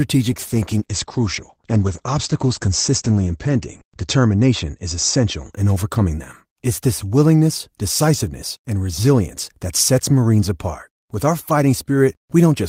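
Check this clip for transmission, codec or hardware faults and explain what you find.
One transmission fault is present, a call bitrate drop. From 0.31 to 5.59 s, ending just before "in overcoming them", the speech turns rough and muffled, worst for about 3.8 s. The encoder was squeezed to fewer bits, which fits a fall from 32 to 12 kbps, coding more coarsely and narrowing the bandwidth from 20 kHz to 8 kHz.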